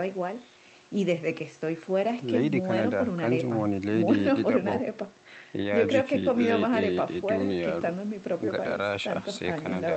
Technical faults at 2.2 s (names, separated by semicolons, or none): none